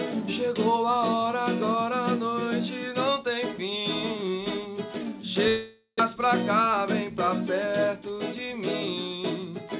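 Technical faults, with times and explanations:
5.48–6.02 s, long network dropout: the last sound carries on as a fading buzz or hiss for about half a second, then a short silence, and the audio resumes further on with roughly 0.4 s missing. Likely caused by a network gap leaving the receiver to conceal lost audio.
6.09–7.88 s, jitter buffer speed-up: the sound runs about 5% fast at unchanged pitch and feels hurried, as the receiver trims pitch-period-length pieces to drain the backlog, removing roughly a tenth of a second in total.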